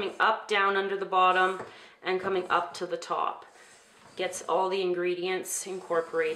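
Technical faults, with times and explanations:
Nothing stood out on listening to the clip.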